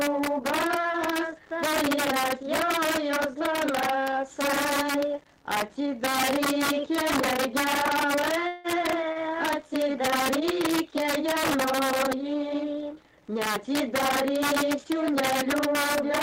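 Throughout the clip, gain pushes peaks about 2 dB past the integer limit, so a small share of samples wrap to the opposite sign, giving sharp, violent cracks on loud moments. From 8.47 to 8.67 s, a call audio freeze follows, likely from packets held up in transit: the last sound continues as a fading buzz or hiss for 170 ms, then resumes where it stopped. At 9.12 to 9.19 s, a short stall from a late packet leaves the jitter buffer empty, so a sound is held 31 ms too long with a slight buzz or dip before the audio carries on.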